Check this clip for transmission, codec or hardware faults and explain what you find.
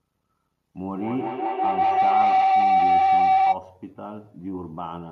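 There is one fault, a feedback howl. From 0.75 to 3.63 s, a loudspeaker-to-microphone loop keeps re-amplifying itself. A tone near 700 Hz swells, the loop repeating about every fifth of a second, peaking about 12 dB above the speech.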